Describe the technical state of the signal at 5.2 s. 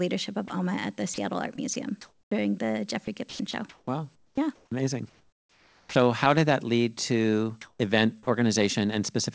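At 5.2 s you're inside a choppy stretch from 3.05 to 5.95 s, likely sound chopped by the voice detector: it keeps gating the speech off and filling about 1.6 s in total with comfort noise.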